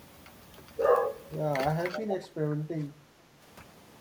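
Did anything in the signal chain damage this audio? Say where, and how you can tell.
Yes, in the call processing stage. There is speech suppressed in double talk at 1.90–2.01 s and 2.50–2.65 s. The level dips by about 5 dB and then about 10 dB, for roughly 70 ms each time. The waveform envelope shows short notches, and the spectrogram shows brief fades across the band. The likely cause is an echo canceller ducking everything while both sides were active.

An echo leak runs from 1.95 to 2.16 s. It is a faint copy of the speech delayed by 491 ms and sitting about 10 dB below it. On the spectrogram, the earlier harmonic pattern reappears weaker and shifted about half a second later. This is likely the far end's canceller letting through loudspeaker sound that its microphone picked up.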